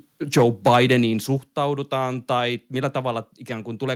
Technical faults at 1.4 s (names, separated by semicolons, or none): microphone volume stepped down